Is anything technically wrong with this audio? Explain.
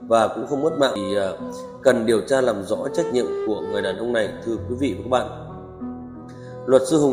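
Yes. At 0.95 s there is a CD skip: a jolt or disc flaw sent the laser to another turn of the spiral, so playback mutes for a few milliseconds, ticks, and resumes elsewhere. Unlike a plain dropout or click, the sound afterwards doesn't continue from where it stopped.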